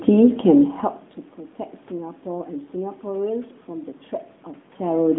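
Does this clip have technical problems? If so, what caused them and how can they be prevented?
No, there's nothing here that counts as a technical problem, so there's nothing that needs preventing.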